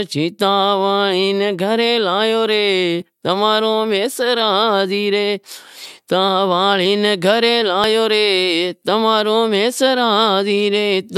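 Tiny skips at 5.85, 6.86, 7.84 and 8.82 s: overlap between stream segments cuts milliseconds each second, leaving waveform jumps and thin vertical spectrogram lines.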